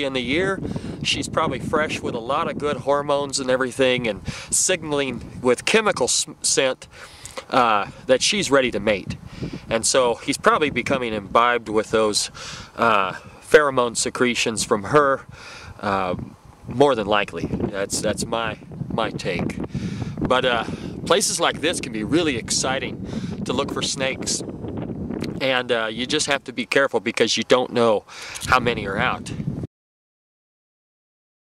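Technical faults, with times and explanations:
17.97 s, chunks out of order: a 5.8 ms chunk plays two chunks late, leaving a brief jumble; waveform shows three hard discontinuities, spectrogram thin vertical broadband lines.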